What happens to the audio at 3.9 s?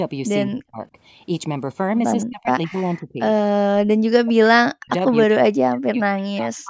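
Around 3.9 s the speech falls into a dip: this is speech suppressed in double talk, running from 3.69 to 4.9 s. The voice drops by roughly 40 dB, most likely because the echo canceller couldn't tell the talker from loudspeaker echo while both sides spoke, so it ducked everything.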